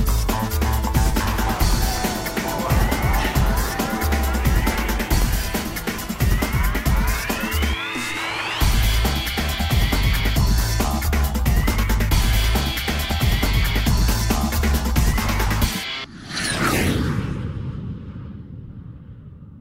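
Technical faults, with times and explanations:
5.22–5.24 s and 13.11–13.14 s, loud pop: a single sharp pop, roughly 10 dB above the surrounding sound, likely from a brief voltage pulse such as a switch or static discharge.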